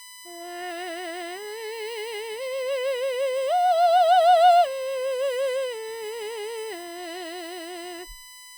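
Current drawn by a USB bus in 1 ms frames leaks through the power or ground, laying a USB whine under the music from start to finish: a fixed-pitch tone at 1 kHz, strongest at its 2 kHz harmonic, roughly 20 dB below the music.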